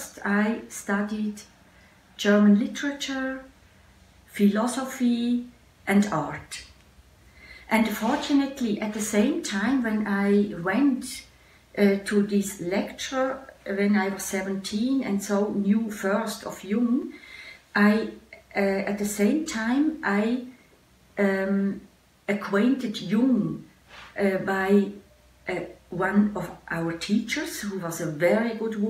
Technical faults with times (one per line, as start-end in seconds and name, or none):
17.02 repeated buffer